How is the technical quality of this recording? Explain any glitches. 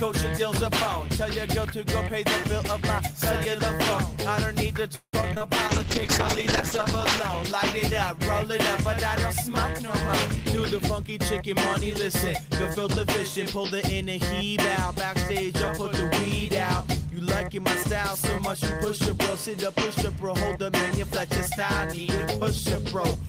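The recording has three kinds of network-related faults, clustered in the first 14 seconds.

From 4.95 to 5.48 s there is repeated packet loss with a robotic sound. Four gaps arrive in quick succession, the longest 178 ms. About half the span is filled by stretching the previous sound, and 60 ms is simply missing, so the audio turns choppy.

From 5.69 to 8.43 s a call bitrate drop takes the encoder from 32 kbps down to 8 kbps, holding the lowest rate for 1.18 s. Coarser coding and a reduced top end make the sound muffled and watery until the rate recovers.

Two jitter buffer speed-ups follow. Between 10.25 and 11.52 s the receiver plays at 107% speed, trimming about a tenth of a second. Between 12.41 and 13.64 s it plays at 103%, trimming a few tens of milliseconds. Short pitch-period segments are cut to shrink the backlog, so the audio runs faster without changing pitch, sounding hurried in the first stretch.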